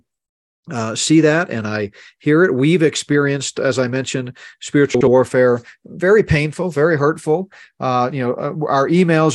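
A speech recording with one transport fault: frames out of order between 4.94 and 5.08 s. For about 130 ms, two adjacent blocks of roughly 64 ms play in swapped sequence, consistent with two frames in each run, so the later material is heard before the earlier. This gives a brief garbled flutter. No time is lost and the timing after 5.08 s is intact.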